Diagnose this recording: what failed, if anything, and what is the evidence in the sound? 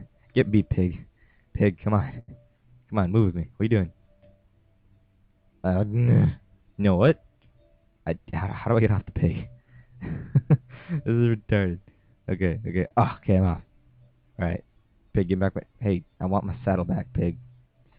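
Network delivery and the receiver's jitter buffer are at fault, with short stalls from late packets at 2.19 to 2.30 s and 12.87 to 12.93 s. The buffer ran dry, so the last sound was held for 86 ms and then 34 ms before playback resumed where it left off. Nothing is lost, but each point sounds briefly frozen.

A jitter buffer speed-up runs from 8.01 to 8.87 s. With excess audio queued, the receiver cut short pitch-period segments repeatedly, about a tenth of a second in total. Playback runs at 109% speed with pitch unchanged, so that stretch sounds hurried.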